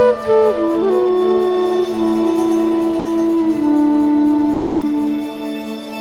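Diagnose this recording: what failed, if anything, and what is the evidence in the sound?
GSM signalling bursts, 0.75 to 1.33 s: a galloping pattern of ticks and short buzzes at about 217 Hz, roughly 20 dB below the music. At the analogue wiring stage, a nearby 2G phone's intermittent radio bursts are being rectified by the audio circuit, so its pulse rate becomes audible.

GSM phone buzz, 1.52 to 2.42 s: a steady, raspy 217 Hz buzz with many harmonics sits about 26 dB below the music. The phone has moved into continuous call transmission, and the analogue wiring demodulates its regular 217-per-second bursts into this tone.

Sound dropped by the voice detector, at 2.99 to 3.05 s (60 ms) and 4.53 to 4.81 s (280 ms): the music gives way to steady comfort noise, then returns. This likely comes from a call-processing stage. The gaps fit a discontinuous-transmission codec such as Opus misclassifying the music as background and pausing transmission.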